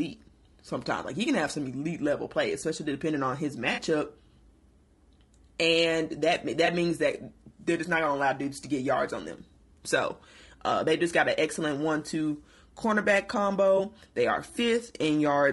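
A speech recording with grainy, rough coding damage throughout. There is noise between the harmonics and a thin, synthetic top band. This is likely low-delay AAC compression (AAC-ELD) at a low bitrate, consistent with about 32 kbps. Its short frames resolve pitch poorly. Three brief smeared, noisy patches show AAC frame loss with concealment. They fall at 3.73 to 3.79 s (40 ms, fitting two lost frames), 6.65 to 6.68 s and 13.77 to 13.80 s (20 ms each). The decoder patches these gaps from the previous spectrum.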